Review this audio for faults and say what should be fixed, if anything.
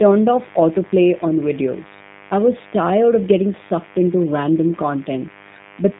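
Two things run through the whole clip. First, mains buzz: a steady, raspy 50 Hz buzz with harmonics stacked well up the spectrum, sitting around 25 dB under the speech. Something switching sharply, like a dimmer or rectifier, is spiking the line twice per cycle. Keep cables shielded and grounded, and away from dimmers.

Second, G.729 codec damage: the speech is confined to about 150 Hz to 3.7 kHz, sounds audibly rough and synthetic, and the buzz warbles, which fits an 8 kbit/s G.729 link rebuilding the signal from a coarse model. Record locally or use a wideband codec.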